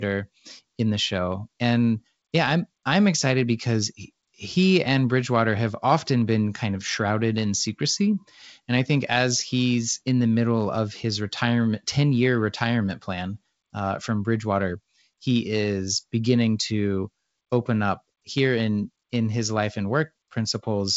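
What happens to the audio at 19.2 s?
Nothing goes wrong at 19.2 s; the speech carries on intact through that moment, with the light band-split hiss and the ceiling near 7.8 kHz of its G.722 wideband telephone coding at 56 kbit/s.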